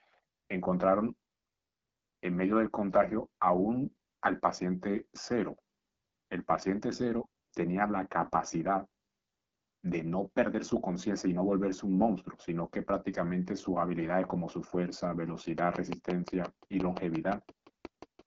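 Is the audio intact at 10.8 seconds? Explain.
No. At 10.8 seconds, as throughout the clip, the speech sounds rough and raspy, with a dull top end and nothing above about 7.5 kHz. This is AMR wideband (HD Voice) codec damage. The codec rebuilds speech up to 6.4 kHz from a pulse-excited vocal tract model and fills the band above that with shaped noise. The plainly audible coarseness fits one of its lowest rates, around 8.85 kbit/s.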